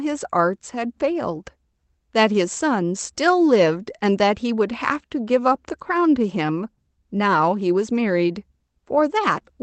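There are no technical faults to describe in time order in this speech, which comes through a call path working as it normally does.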